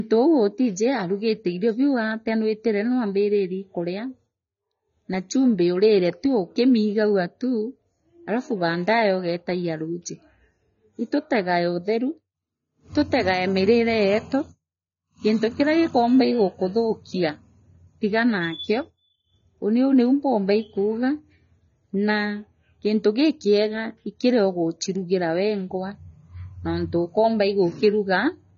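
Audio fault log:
Throughout, AAC compression: speech sounds dull and smeared, nothing above 7.1 kHz, fizzy sibilants. Likely a low bitrate around 24 kbps forcing coarse quantisation.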